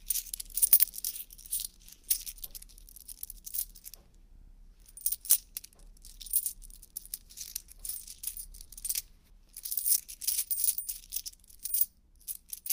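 At 4.35 s there are repeated frames. A 60 ms block of compressed audio was sent again, playing three extra times until 4.53 s. The sound stutters in place. The repeats stretch the audio by 180 ms.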